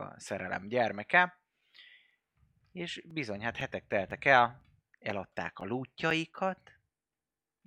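From 1.11 s to 7.60 s the speech carries evenly spaced ticks every 0.5 s, heard only while sound is present. These are periodic USB or driver dropouts: something stalls the audio path at a fixed interval, and each stall replaces a few milliseconds of audio with silence.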